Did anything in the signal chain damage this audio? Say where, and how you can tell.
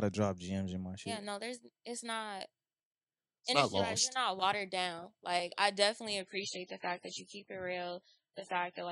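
Yes. The damage is at the network stage, from an adaptive stream at a lower bitrate. Right after "I definitely", at 6.20 s, the treble drops abruptly with no gap until the end. A spectrogram shows everything above 10.3 kHz vanishing there, which points to a switch from 128 to 16 kbit/s MP3.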